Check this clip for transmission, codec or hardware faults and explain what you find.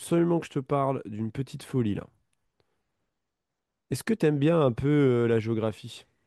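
Nothing in the recording points to a fault anywhere along its path. There is nothing to report at any point in the speech.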